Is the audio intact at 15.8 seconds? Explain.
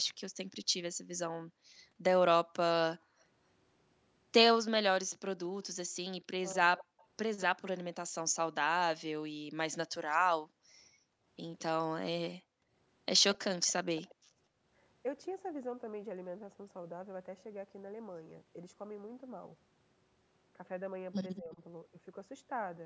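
Yes, the speech at 15.8 seconds is intact, carrying only the normal band limit of the call's microphone processing, with nothing above 8 kHz and the lowest bass trimmed.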